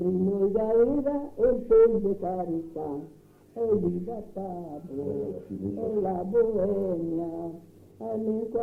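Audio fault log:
Nothing stood out on listening to this clip.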